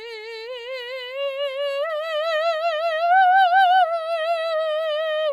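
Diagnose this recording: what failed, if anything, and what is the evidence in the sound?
Nothing in the chain has failed: the music arrives as a continuous, intact signal, with nothing audible that points to trouble at any stage between capture and playback.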